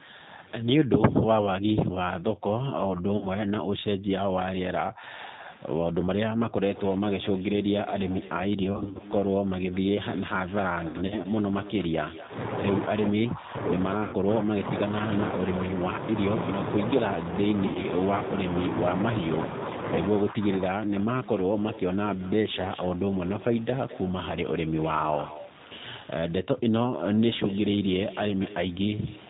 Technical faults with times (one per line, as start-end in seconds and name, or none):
0.00-29.29 G.729 codec
0.79-9.52 speech suppressed in double talk
3.17-3.28 VoIP packet loss concealed by the speech codec
8.63-9.01 VoIP packet loss concealed by the speech codec
10.88-11.28 VoIP packet loss concealed by the speech codec
12.88-17.21 speech suppressed in double talk
14.03-14.15 VoIP packet loss concealed by the speech codec
17.67-17.85 VoIP packet loss concealed by the speech codec
20.22-20.77 speech suppressed in double talk